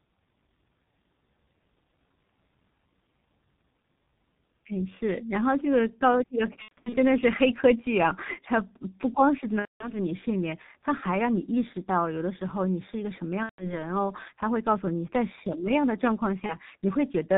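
The speech runs through a G.723.1 codec at 6.3 kbit/s, with 30 ms frames and a slowly updated voice model, and it passes nothing above 4 kHz. Throughout, the voice sounds heavily muffled and hoarse, with consonants smeared together.

VoIP packet loss concealed by the speech codec follows at 6.62 to 6.98 s, 9.60 to 9.96 s, 13.43 to 13.87 s and 16.46 to 16.57 s. The decoder fills each gap from its last pitch and filter, lowering the gain as it goes. About 210 ms is missing in each of the first two gaps, with losses in the first scattered over 300 ms and its longest run 90 ms. The third gap loses about 150 ms and the fourth about 30 ms, which fits a single lost frame. Each gap turns into a fading buzzy tone or coloured noise, and the voice stays weak and distorted briefly afterwards.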